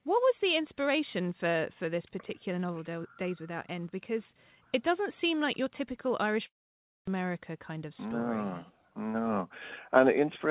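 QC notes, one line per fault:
6.46–7.23 s, long network dropout: the sound stops being delivered and the receiver stretches the last received audio into a brief fading buzz, then holds silence for about 0.56 s before the signal resumes at 7.23 s. Roughly 0.6 s of material is skipped rather than delayed, which likely points to a run of lost packets concealed by the jitter buffer. The G.711 mu-law call path limits everything around the gap to below 4 kHz.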